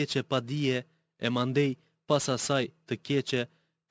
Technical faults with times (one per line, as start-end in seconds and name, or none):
0.00-3.90 sample clock jitter